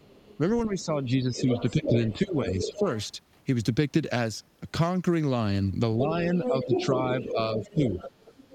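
From 0.00 to 0.38 s, the other side's voice leaks through faintly, about 30 dB below the talker. The loudspeaker sound likely reached the microphone and the echo canceller failed to remove it. From 0.66 to 2.86 s, the speech is suppressed in double talk. The talker's level dips by about 10 dB, over roughly a second and a half in total. Both sides were likely talking at once, so the canceller turned both down. Inside that stretch, a short scrap of leaked voice appears at 0.79 to 0.85 s, again about 30 dB down. From 1.34 to 3.06 s, the leak grows to about 5 dB below the talker. It is clearly audible as a second voice, likely from echo that was not cancelled. From 5.98 to 7.92 s, the talker is pushed down again in double talk, by about 5 dB at the deepest, for about one second in total. The likely cause is the same overlap of both sides. At 6.35 to 6.86 s, the leaked voice is as loud as the talker. 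From 7.20 s to the end, it sits about 10 dB below, with uncancelled echo the likely source.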